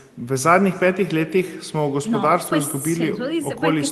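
Throughout, the speech returns as a faint, thinner copy about a third of a second late, about 23 dB down: echo with no canceller from a far-end loudspeaker.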